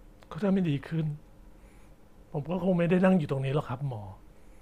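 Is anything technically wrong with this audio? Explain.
No, nothing is technically wrong with this audio.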